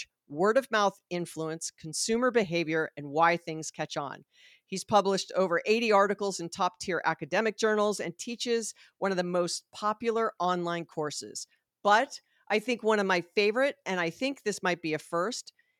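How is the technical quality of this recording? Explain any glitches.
No technical glitches can be heard in this speech recording. Nothing in the signal chain draws attention to itself at any point.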